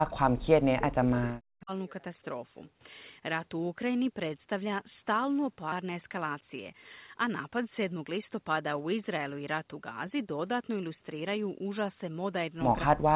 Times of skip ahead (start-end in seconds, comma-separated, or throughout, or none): 5.72-5.74